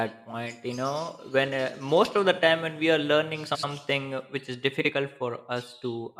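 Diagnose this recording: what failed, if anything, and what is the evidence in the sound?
Frames out of order in the network or packet delivery stage. At 3.46 to 3.64 s, and again at 4.80 to 4.90 s, the speech flutters briefly. Each time, two adjacent blocks of equal length, about 85 ms in the first event and 43 ms in the second, were decoded swapped. No time is lost.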